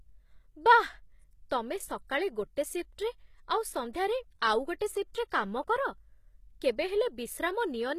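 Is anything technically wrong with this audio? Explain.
Yes. The speech carries plainly audible codec damage throughout, with two brief attack smears.

HE-AAC compression is the likely cause of the gritty, lispy treble. Nothing is present above 14.9 kHz, and the upper band is rebuilt from copied lower bands rather than coded directly, so its harmonics misalign. The degree of damage fits a bitrate around 20 kbps.

Pre-echo occurs at 4.79 s and at 5.14 s, just before "କାମ କର". The codec spreads quantisation noise across each block, so a short hiss of 18 ms and 11 ms respectively leaks ahead of the attack, which sounds softened and smeared.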